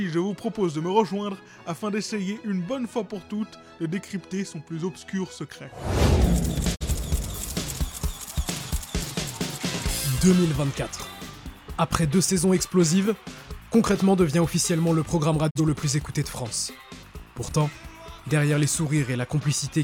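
At 6.74 to 6.84 s and again at 15.49 to 15.60 s there's a digital broadcast dropout: the receiver mutes for a bad frame with a quick 20 ms fade, leaving a short hole. Each gap fits a single lost frame of about 43 ms, gone for good.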